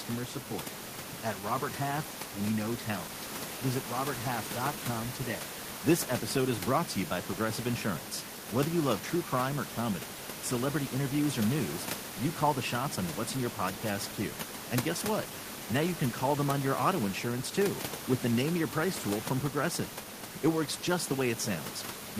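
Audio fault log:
Nothing here counts as a system fault, and the only thing in the background is ordinary room noise sitting about 13 to 15 dB below the speech.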